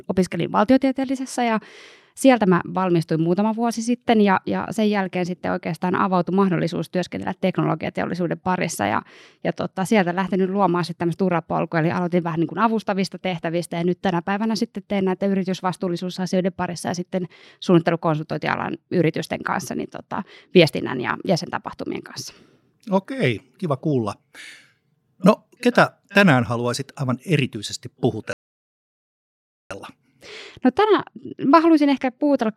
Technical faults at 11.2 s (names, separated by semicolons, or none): none